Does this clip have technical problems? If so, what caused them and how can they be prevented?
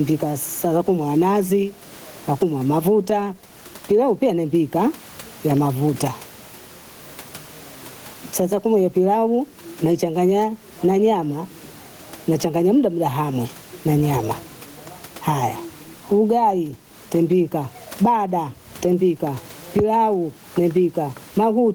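Yes. Gain pumping runs through the whole speech clip. The background swells in the pauses and ducks by around 15 dB under each loud sound. The likely cause is microphone gain set far too high, with a fast limiter clamping it down. On a waveform, the peaks look squashed to an even height, and the gaps bulge upward. A spectrogram shows the background noise brightening between phrases and dimming under speech. The room noise, about 40 dB below the speech, is what rises and falls. Lowering the input gain and using a gentler, slower limiter prevents it.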